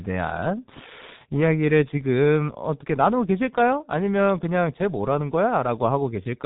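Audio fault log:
Throughout: G.723.1 codec. Heavy low-rate speech coding runs across the whole clip, and the sound is what you'd expect at a bitrate around 6 kbit/s. Nothing survives above 3.8 kHz, so the speech comes across muffled and boxy. The codec rebuilds each chunk from a coarse, slowly updated voice model instead of the real waveform, so the tone turns hoarse and buzzy and consonants smear into each other.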